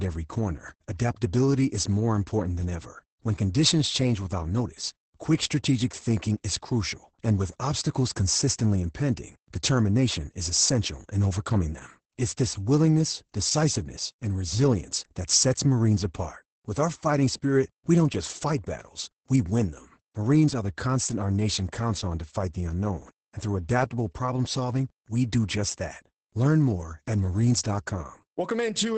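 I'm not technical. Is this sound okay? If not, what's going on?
No, not quite. The whole recording has heavy Opus voice compression squeezing it into very little data, so the speech sounds muffled, a bit hoarse and faintly robotic. Everything above roughly 8.7 kHz is missing, which takes away the crisp, airy top.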